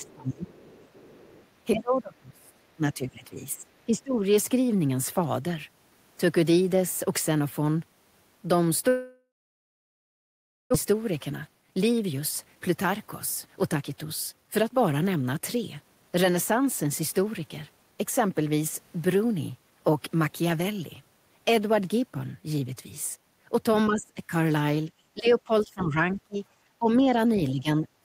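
Right from the start, 0 to 0.13 s and again from 0.7 to 1.46 s, there's a faint second voice sitting about 30 dB under the talker. That's the other side's voice leaking through, likely loudspeaker playback that the echo canceller didn't fully scrub from the mic. It's quiet and scrappy, easy to miss unless you're listening for it.

Overlapping that, 0 to 0.73 s and then 1.74 to 4.15 s, the talker's own voice sinks, by around 20 dB in the first stretch and roughly 25 dB at worst in the second. It's patchy rather than one clean drop. That's speech suppressed in double talk: with both ends talking, the canceller likely couldn't tell the talker from the echo and ducked everything.

At 8.89 s the audio stops arriving, and it's a long network dropout, likely a proper outage. What you hear is the last bit of sound carried on as a fading buzz, then silence for well over a second. When sound returns at 10.76 s, about a second of what was said is simply gone, and the stream is now running noticeably later, by something like 700 ms.

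Then from 10.86 to 18.19 s it plays at 111% speed with the pitch unchanged. That's jitter buffer speed-up. The receiver is trimming tiny pitch-period slices over and over to claw back the backlog from the dropout, shedding roughly 0.7 s in total. It comes across as a bit rushed.

Later the double-talk ducking returns, at 23.89 to 24.31 s with a dip of about 25 dB, and from 24.87 s to the end with a drop of around 20 dB, again likely the canceller clamping down while both ends talk. Inside that last stretch, from 26.13 to 26.38 s, the other side leaks through once more at about 30 dB below the talker.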